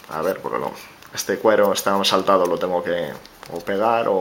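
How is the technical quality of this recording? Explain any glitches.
The technical quality of the recording holds up, with no glitches to explain.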